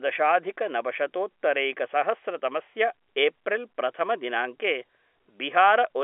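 No technical faults can be heard anywhere in the recording.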